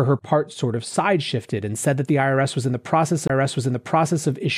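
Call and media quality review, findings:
CD skip, 3.27–3.30 s: brief mute of about 20 ms, then the speech resumes from a different point rather than continuing where it left off. Component: CD playback transport. Mechanism: a knock or disc flaw threw the laser onto another turn of the spiral track, so the player muted momentarily and picked up again from the wrong position.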